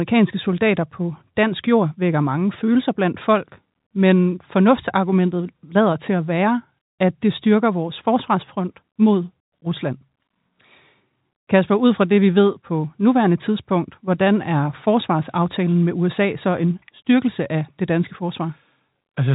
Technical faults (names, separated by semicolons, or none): none